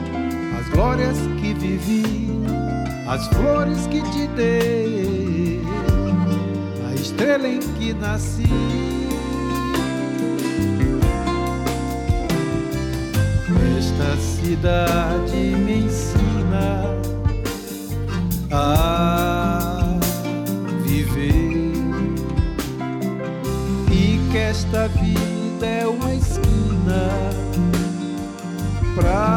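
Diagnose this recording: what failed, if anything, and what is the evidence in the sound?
A de-emphasis stage was skipped, leaving pre-emphasis on from 17.67 to 21.15 s. The treble tilt matches a 50 µs FM curve, lifting 10 kHz about 10 dB above 1 kHz, so the sound turns thin, bright and sibilant.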